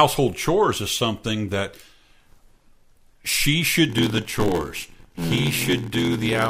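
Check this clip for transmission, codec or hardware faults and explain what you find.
One fault is present in the speech. From 3.88 s to the end, at 6.50 s, there is a block size mismatch (padded). Each block arrives short and is filled out with zeros, which fits a 512-sample read size. The repeated gaps make an 86.1 Hz buzz. The speech slows to 0.861 times normal speed, with its timbre unchanged.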